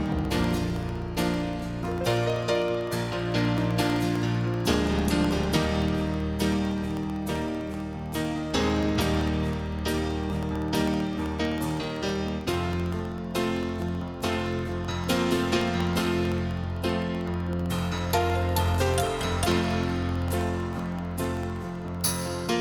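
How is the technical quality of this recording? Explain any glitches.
Not great: there's one steady fault running nearly end to end. Periodic USB or driver dropouts from 0.06 to 22.52 s: something stalls the audio path every 64 ms, blanking about half a millisecond with silence, heard as regular ticks under the sound.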